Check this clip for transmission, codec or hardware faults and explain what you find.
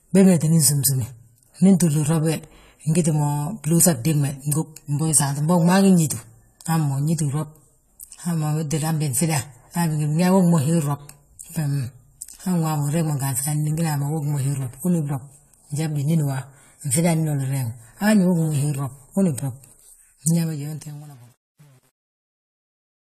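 Two faults are present: codec damage across the whole recording, and distortion on the closing fade.

Throughout the speech, the sound is band-limited with nothing above 14 kHz, and codec damage is plainly audible. This is likely AAC compression, specifically AAC-LC at a low bitrate, consistent with roughly 32 kbps. With so few bits per frame, the encoder discards the top band and coarsely quantises what remains. The result is a dull, smeared quality, with a warbling, fizzy edge on sibilants and held sounds.

From 20.31 s to the end at 23.19 s, there is truncation distortion on a fade. The fade-out runs from about 20.3 s to 23.2 s, but the level was processed at low resolution without dither, consistent with around 9 bits. As the signal drops toward the smallest step, the waveform collapses into a few coarse levels. The result is gritty, worst from 20.75 s onward.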